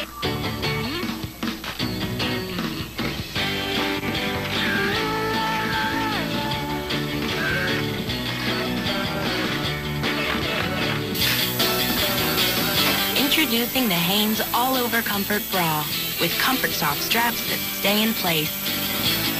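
From 11.15 s to the end at 19.40 s, pre-emphasis is left on: an FM 75 µs treble boost went uncorrected, lifting 10 kHz about 14 dB over 1 kHz, so the sound turns thin, bright and sibilant.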